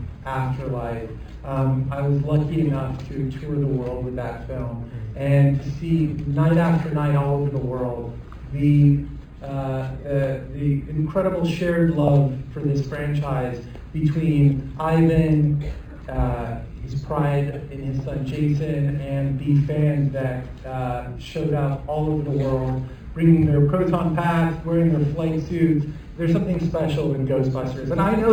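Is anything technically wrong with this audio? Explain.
Yes. Imaging from linear upsampling runs through the whole clip. The band stops near 5.5 kHz, which fits material at about 11 kHz raised to 44.1 kHz by joining samples with straight lines. That interpolation filters weakly, so the top of the band is dulled and a mirrored copy of the spectrum remains from about 5.51 kHz to 11.03 kHz, roughly 40 dB down. It is heard as a faint metallic shimmer on bright, high-frequency content.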